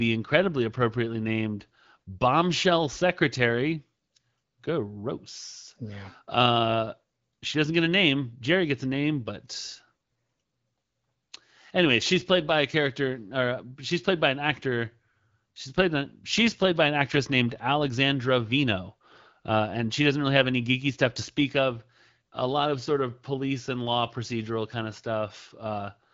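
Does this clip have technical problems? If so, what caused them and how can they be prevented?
No, this recording has no technical problems to report.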